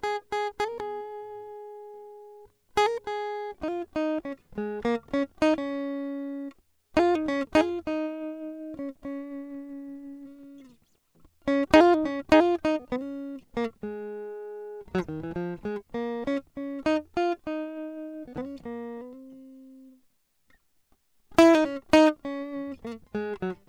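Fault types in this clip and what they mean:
No faults can be heard.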